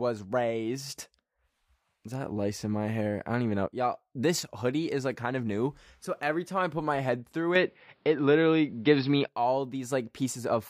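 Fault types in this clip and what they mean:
Input switched to a poorer device, 7.55 to 9.28 s: right after "put my head through", the speech abruptly loses everything above 5.5 kHz and turns dull and boxy, with no gap at the change. The level shifts by roughly 5 dB, and a faint new background noise appears, around 45 dB below the speech. The likely cause is the recording input jumping to a narrower-band microphone or headset path with its own tone and noise, then returning.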